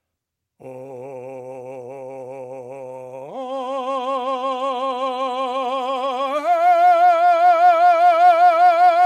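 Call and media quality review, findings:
Nothing in the music stood out as a problem on listening.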